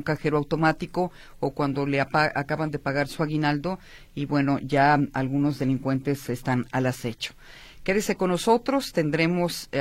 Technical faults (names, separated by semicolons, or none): none